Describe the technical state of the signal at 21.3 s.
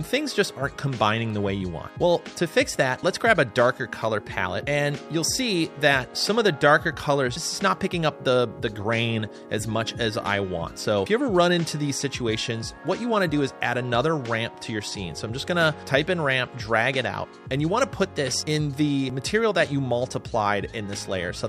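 At 21.3 s the signal is intact, with no audible technical fault at that point.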